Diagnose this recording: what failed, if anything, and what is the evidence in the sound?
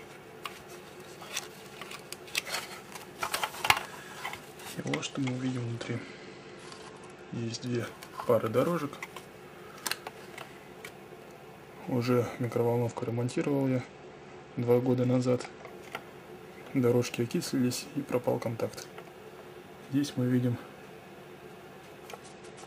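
Bluetooth SBC bit pool drop, at 4.80 to 7.80 s, 12.88 to 15.67 s and from 22.23 s to the end, is a codec-stage fault. The treble dulls and gritty noise rises, consistent with a congested link forcing the bit pool from about 31 down to 11, roughly 83 kbps, until the rate recovers.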